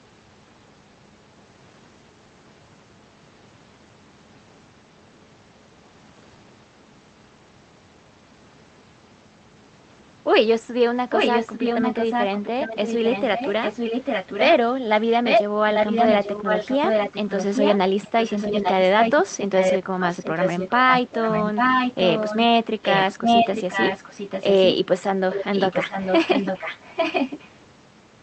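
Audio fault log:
11.1–14.53 s, 15.24–15.43 s, 15.74–22.38 s, 22.83–24.75 s, 25.31–27.48 s: echo leak. Speech repeats 846 ms late, at about 5 dB below to 5 dB above the speech, likely loudspeaker sound escaping echo cancellation; spectrogram shows speech patterns duplicated, shifted right.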